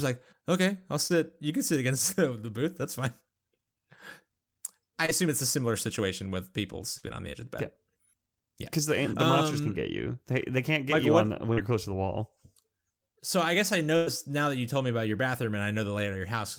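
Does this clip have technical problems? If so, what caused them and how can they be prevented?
Yes. Short concealed packet loss at 1.07–1.12 s, 5.06–5.23 s and 11.53–11.58 s (between "you what the when" and "you're close to the") leaves brief 20–40 ms smears where the decoder extended the last sound. Unlike a burst, nothing audibly fades.

A burst of packet loss at 6.98–7.05 s (between "similar situation with people" and "on the edge of") and 13.96–14.08 s (between "I guess I" and "now that you told") drops about 60 ms and 100 ms. A held buzz or hiss fades, then speech resumes with sound missing.

Both can be prevented with a steadier network path, a larger jitter buffer, or forward error correction.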